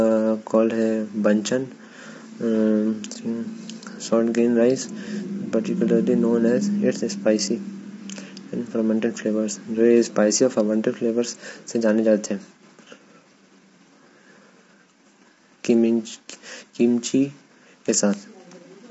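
Throughout, the speech is grainy, with noise between harmonics and nothing above 7.7 kHz, unlike a clean band limit: likely low-delay AAC compression near 24 kbps.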